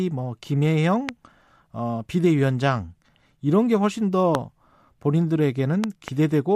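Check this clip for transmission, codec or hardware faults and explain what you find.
The clip has one kind of fault, a loud pop, heard three times: 1.09 to 1.11 s, 4.35 to 4.37 s, and a double pop from 5.84 to 6.10 s. A sudden voltage step, likely from a connector, switch, static discharge or driver glitch, enters the signal path. It lands as a sharp thump standing well above the speech, which carries on underneath.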